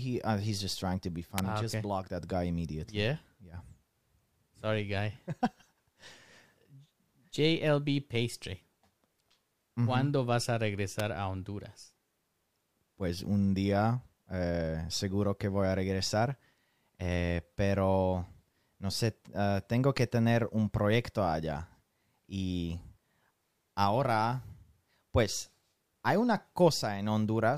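A nearby switch, motor or static discharge likely arced onto the audio line, causing an electrical switching spike at 1.38 s and again at 10.99 s, just after "vas a". Each is a sharp snap laid over the speech, the first louder than the second.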